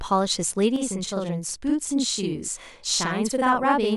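A speech clip with a channel delay (doubling) fault. From 0.76 s to the end, every sound is heard twice. The second copy trails the first by 46.44 ms and arrives at the same level. It reads as a tight slap echo. The cause is one channel running a full buffer late before both are summed to mono. The gap fits a 2048-sample buffer at 44.1 kHz.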